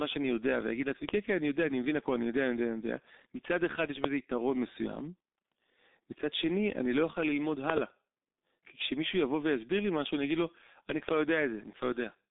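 Speech throughout, coded with G.723.1: nothing above 3.8 kHz, a narrow 250 Hz to 3.7 kHz line band, and muffled, hoarse, smeared consonants from coarse 30 ms frames at a very low bitrate, around 6 kbit/s. Loud pops at 1.09–1.11, 4.04–4.07 and 11.09–11.11 s, each a single sharp burst roughly 15 dB above the speech, which continues beneath them; likely a voltage spike from a switch, plug, static or driver glitch.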